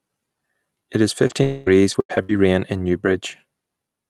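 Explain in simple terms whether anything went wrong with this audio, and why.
Several network faults hit this call between about 1.27 and 2.33 seconds.

Short concealed packet loss: from 1.27 to 1.32 s, about 20 milliseconds of audio arrived too late to play. The receiver covered the hole by extending the sound just before it and blending back, which leaves a brief smear or wobble.

Lost packet rebuilt from error correction: inside that same moment, from 1.29 to 1.31 s, a lost 20-millisecond piece was replaced with a rougher backup copy carried by the next packet. There is no gap, but that instant sounds grainier and noisier.

Long network dropout: from 1.43 to 1.69 s the sound turns into a stretched, fading buzz or hiss for roughly a quarter of a second, with no true silence, before real audio resumes. The likely cause is that nothing reached the receiver for that whole stretch, so it kept inventing sound.

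Repeated packet loss (robotic sound): from 1.66 to 2.33 s, ending just before "rain in", audio dropped out four separate times, the longest gap 90 milliseconds. Each hole was patched, some of it from backup copies, which makes the sound choppy.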